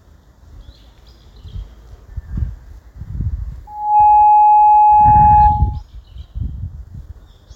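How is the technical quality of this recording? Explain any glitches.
There's one real problem: loudspeaker feedback squeal from 3.67 to 5.82 s. A mic was hearing its own speaker, and the loop ran away at 841 Hz, so a pure tone swells up within about a third of a second and sits well above everything else.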